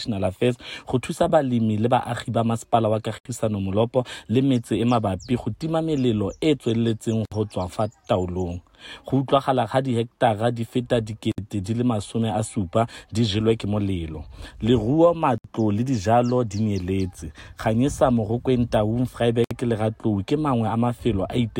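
At 3.18, 7.25, 11.32, 15.38 and 19.44 s, roughly every 4 s, a gap at a join of encoded pieces cuts in: 69 ms, then 64 ms each time. Encoder start delay and end padding were left in. Waveforms show flat dropouts; spectrograms show thin blank columns with slightly smeared edges.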